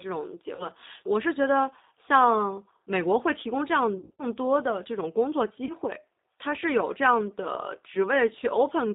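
Throughout, the speech sounds slightly rough and synthetic, with nothing above 4 kHz. That is the G.729 codec at 8 kbit/s, which rebuilds the voice from a vocal tract filter, a pitch predictor and a few pulses per frame, so the damage is plainly audible.

At 0.55 s the sound briefly stretches into a fading buzzy tone or coloured noise for about 40 ms, and again at 5.65 s. From 3.99 to 4.23 s the effect is longer and broken up: about 160 ms scattered over 200 ms, with a longest run of 60 ms. Each is VoIP packet loss concealed by the speech codec. The decoder extends its last pitch and filter at falling gain, and the voice stays weakened briefly after the gap. The 40 ms losses fit two dropped 20 ms packets.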